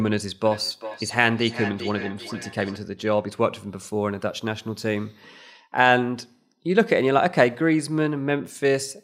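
In this speech clip, from 0.45 to 2.83 s the sound returns at a steady interval of roughly 0.4 s, peaking about 12 dB below the speech. This is feedback echo between two devices: one device replays the other's audio, which its microphone recaptures beyond either echo canceller's reach.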